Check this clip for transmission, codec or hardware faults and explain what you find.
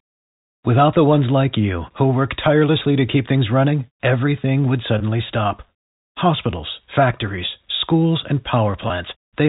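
Two brief dropouts from packet loss with pitch repetition, at 4.98 to 5.00 s and 8.88 to 8.90 s. The receiver lost about 20 ms of audio each time, which points to a single packet, and covered each gap by repeating the last pitch period. Each gap is too short for the fade-out, so it sounds like a tiny held, buzzy snag in the speech. The G.711 telephone coding underneath stays band-limited below 4 kHz.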